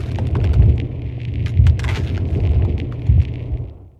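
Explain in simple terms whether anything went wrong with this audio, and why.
Nothing went wrong with this audio, so there's nothing here to worry about or fix.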